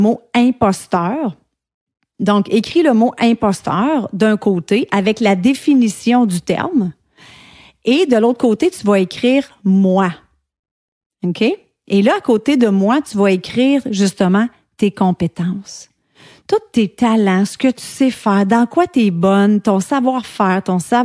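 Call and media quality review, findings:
No audible faults found in the speech recording; nothing to log against capture, transport or playback.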